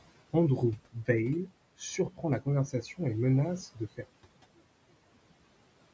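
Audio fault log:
4.04–5.93 s, one channel inverted: the speech abruptly falls by about 27 dB to a faint residue, likely because one stereo channel's reversed polarity cancels the shared centre content when summed to mono. The waveform shrinks to a sliver, and the spectrogram turns pale.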